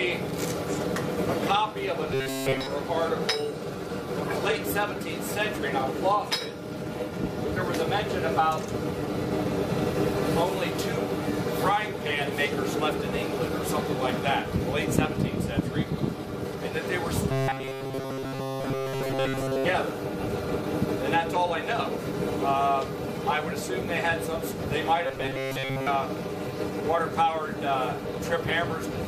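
A rigid, metallic buzz near 134 Hz is heard from 2.14 to 2.67 s, again from 17.30 to 19.64 s, and from 25.07 to 25.87 s, loosely tracking the original contour. This is robotic sound from repeated short buffers, likely because new audio arrived too seldom and a fragment of roughly 7.5 ms was looped to fill the gaps. For most of each stretch, repeats stand in for skipped material, stamping that fixed pitch onto the sound.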